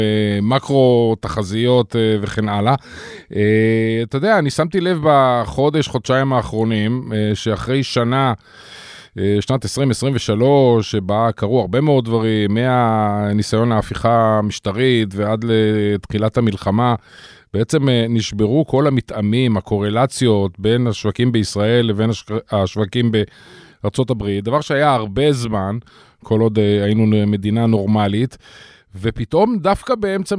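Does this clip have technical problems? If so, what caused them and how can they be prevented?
No, this speech recording has no audible technical problems. Nothing in it needs a cause traced or a fix applied.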